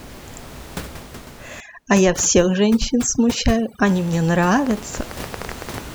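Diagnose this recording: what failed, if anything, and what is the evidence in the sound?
From 1.60 to 3.86 s the background falls to near silence with twinkling specks. This is overdone noise removal at the call-processing stage. The suppressor is set too hard against room noise sitting about 17 dB below speech, so it shuts off whole frequency bands along with quiet speech detail.

From 4.67 to 5.79 s a train of clicks sits over the sound, continuing into pauses. There are about ten similar sharp ticks at roughly 10 per second, irregularly spaced and peaking around 10 dB above the signal. The likely source is a faulty connection or power supply in the analogue wiring, or interference from nearby equipment injecting pulses.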